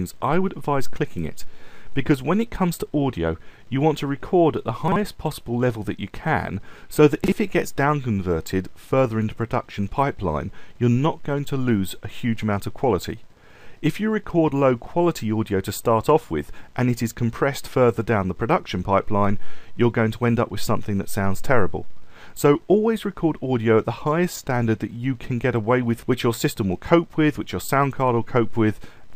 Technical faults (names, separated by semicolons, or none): chunks out of order